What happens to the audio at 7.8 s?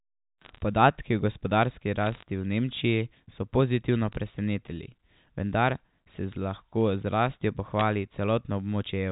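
At 7.79 s, just after "z rastjo", a short burst of bit errors on a digital phone line hits the G.711 stream at a rate of roughly a few tenths of a percent. Flipped bits throw single samples to wrong values, producing brief sharp ticks of crackle. On a waveform they appear as isolated one-sample spikes, and on a spectrogram as thin vertical broadband lines reaching the 4 kHz ceiling.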